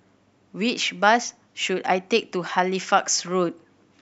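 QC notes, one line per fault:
No technical faults are present in the signal.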